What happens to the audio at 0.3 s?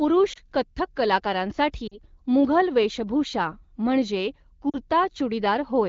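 A lost AMR speech frame, 0.33 to 0.39 s, causes a brief dip or warble, not true silence, as the decoder briefly repeats the last good parameters at falling gain; this fits a single 20 ms frame.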